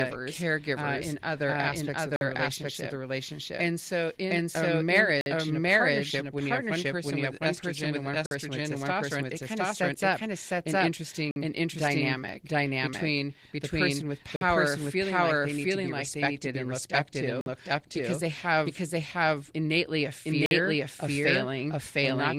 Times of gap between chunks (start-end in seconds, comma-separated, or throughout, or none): 2.16-2.21, 5.21-5.26, 8.26-8.31, 11.31-11.36, 14.36-14.41, 17.41-17.46, 20.46-20.51